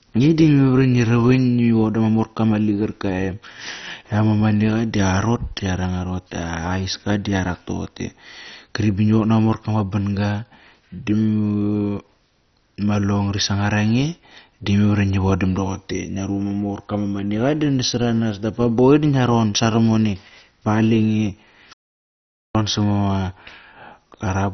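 MP2 compression damage runs through the whole recording, most likely from MPEG Layer II encoding at a very low bitrate, and the heavy damage fits something around 32 kbps. The encoder had too few bits to cover all its sub-bands, so it switched off everything above about 6.1 kHz and quantised the remaining bands coarsely. The speech sounds muffled and dull, with a gurgling, granular roughness that shifts as bands flicker in and out.

An audio dropout to silence begins at 21.73 s and lasts until 22.55 s, removing about 0.82 s of sound. The speech cuts off abruptly and the gap is silent, with no room tone or hiss underneath. This likely happened because the input signal was lost, through a disconnection or a momentary mute, while recording continued and wrote silence. Whatever was spoken during that stretch is gone, and the speech resumes mid-flow.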